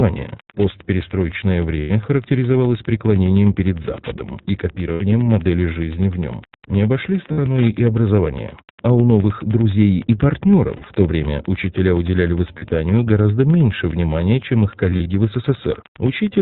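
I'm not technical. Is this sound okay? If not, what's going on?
No, there are three problems in this speech recording.

The first is Wi-Fi interference. A Wi-Fi radio sitting close to the recording equipment leaks its signal into the audio, giving a faint, steady ticking about ten times a second that runs under the whole clip. Unlike random clicks or a low electrical hum, it keeps a very regular, machine-like rhythm, because the Wi-Fi device announces itself at a fixed interval of roughly a tenth of a second.

The second is the iLBC codec, a way of squeezing speech down for internet calls. It throws away all the upper treble, so everything sounds like a phone line, and it rebuilds the voice from short 20 ms chunks. The result here is plainly rough and slightly artificial, almost synthetic. What separates this from an ordinary muffled phone line is that rough, synthetic texture, present evenly from start to finish.

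The third is lost iLBC frames: bits of the call's data went missing, and the decoder filled each gap by stretching the last sound it had into a brief held, buzzy or breathy tone. This happens at 1.80 to 1.91 s (100 ms), 4.92 to 5.03 s (80 ms), 7.32 to 7.39 s (60 ms), 10.76 to 10.85 s (60 ms), and 12.58 to 12.65 s (40 ms). From 14.90 to 15.09 s the losses come as several short bits, the longest around 40 ms. These aren't silent dropouts, and the voice snaps back to normal immediately after each one.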